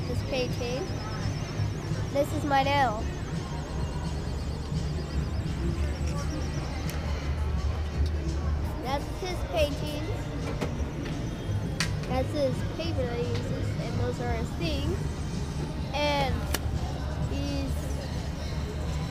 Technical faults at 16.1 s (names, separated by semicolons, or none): none